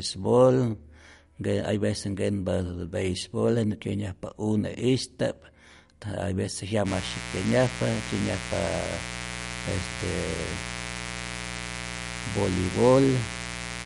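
From the start the speech has a watery, swirly quality and nothing above 11.2 kHz, which points to MP3 compression, likely at a low bitrate around 48 kbps. The encoder ran short of bits, dropped weak frequency detail frame by frame, and cut the top end, so the damage is plainly audible.

At 6.84 s a mains buzz comes in and stays to the end. It's a steady, raspy 60 Hz buzz with harmonics reaching well up the spectrum, from switching spikes leaking in twice per mains cycle, sitting about 10 dB below the speech.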